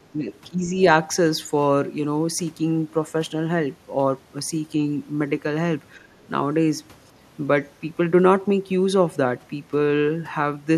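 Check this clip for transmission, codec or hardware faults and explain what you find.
Three short dips in level appear, likely speech suppressed in double talk. At 0.03 to 0.27 s, 0.5 to 0.74 s and 5.96 to 6.15 s, the speech sinks by roughly 20, 15 and 10 dB. The echo canceller probably ducked both sides when they overlapped.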